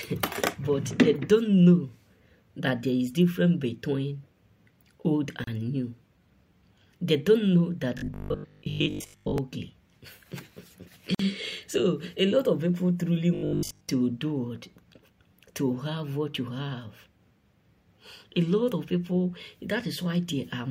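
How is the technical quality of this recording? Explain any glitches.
The recording has two recurring problems, short dropouts and stretches of buzzy, mechanical sound.

At 5.44 s and 11.15 s there's a gap at a join of encoded pieces, silences of about 33 ms and 48 ms where separately encoded chunks were butted together untrimmed, so the flow briefly stops and resumes.

From 7.98 to 9.38 s and 13.35 to 13.89 s the sound turns into a rigid 50 Hz metallic buzz, robotic sound likely from repeated short buffers. Most of that stretch is replayed 20 ms chunks standing in for audio that arrived too late.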